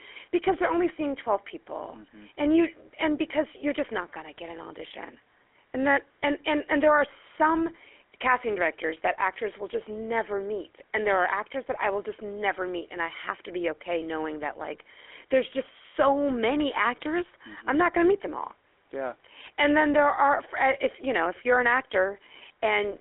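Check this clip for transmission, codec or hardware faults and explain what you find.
The clip carries one fault, present for its whole length: GSM full-rate codec damage. The speech was squeezed through the original GSM vocal-tract model, which rebuilds the excitation from sparse, evenly spaced pulses and discards much of its detail, at a data rate that fits 13 kbps. The line passes only about 300 Hz to 3.4 kHz, so the speech sounds narrow and telephone-like, with a clearly audible buzzy, gravelly roughness throughout.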